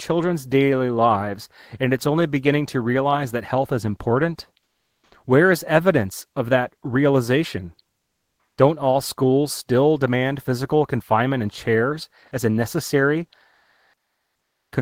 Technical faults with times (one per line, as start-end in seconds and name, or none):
4.63-5.11 comfort noise in place of the background
7.99-8.55 comfort noise in place of the background
13.55-14.71 comfort noise in place of the background